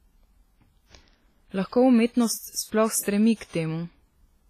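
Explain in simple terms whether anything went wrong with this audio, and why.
Something's off for the whole clip. The speech sounds ringing and washy, with a hiss that swells and fades along with it, and the top end stops around 15 kHz. That's likely heavy WMA compression, which smears detail and drops quieter sound.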